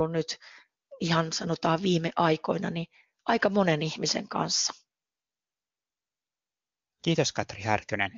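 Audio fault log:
There is no fault.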